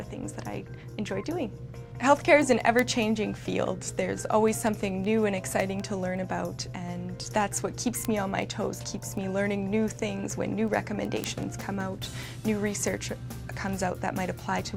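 A receiving device running on its own clock, not locked to the sender's digital link, is reading the stream at a rate that drifts by roughly 100 ppm. Each time the two clocks slip past each other, a single sample is dropped or repeated. The result is word clock ticks: sharp clicks of uneven strength, about five a second and around seventy in all, running steadily through the sound from 0.17 s to 14.62 s.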